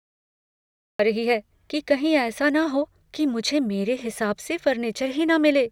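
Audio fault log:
0.00–0.99 s, cut-off start. The clip holds digital silence until 0.99 s. Speech then appears abruptly, already in the middle of a sound. There is no natural attack or fade-in. Capture began late, so the opening of that sound was never recorded.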